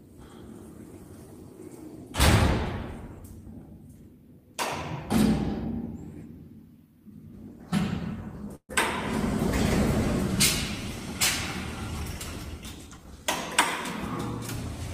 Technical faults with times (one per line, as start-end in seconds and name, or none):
8.55-8.71 call audio freeze
12.86-13.26 jitter buffer speed-up